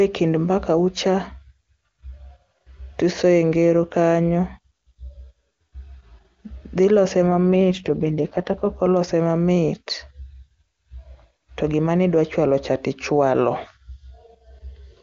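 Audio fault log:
7.29–8.80 s, AMR rate drop: just after "dhi lose" the speech turns rough and synthetic for about 1.5 s, then clears. This fits the wideband codec falling from 23.85 to 8.85 kbit/s. Unlike packet loss there is no gap, and the bandwidth stays full.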